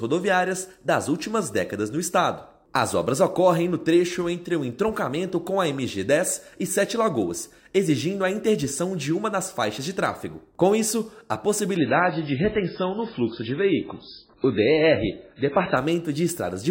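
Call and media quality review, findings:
Sudden dulling at 11.77 s, lasting 4 s to 15.77 s: treble gone above about 5.3 kHz, swirly codec artefacts, no gap either side. Adaptive stream at a lower bitrate. The player switched to a low-bitrate rendition, consistent with MP3 near 16 kbit/s.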